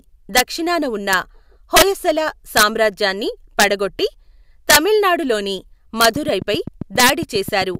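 Integer overflow cracks through the speech at 0.37 s, just before "దక్షిణాన ఉన్న", then at 1.13, 1.76, 2.57, 3.60, 4.70, 6.01 and 7.00 s. Loud peaks pushed past the integer limit, by up to about 5 dB, and wrapped to the opposite sign instead of being held there, so you get sharp, violent snaps rather than a clipping fuzz.

From 6.16 to 7.76 s there's a train of clicks: roughly fifteen near-identical ticks at a regular 7.5 per second, peaking about 5 dB above the speech and ticking on through the gaps too. It's likely interference from nearby equipment or a faulty connection or power supply.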